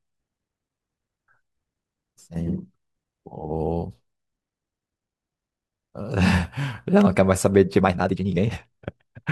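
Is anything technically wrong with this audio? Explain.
Yes. A time-stretched section runs from 7.78 s to the end of the clip at 9.32 s. The speech there is likely squeezed by software to fit a shorter length, playing at about 1.93 times normal speed while short fragments are dropped to hold the pitch steady. The pace jumps abruptly at 7.78 s while the pitch stays unchanged, and the final stretch sounds rushed.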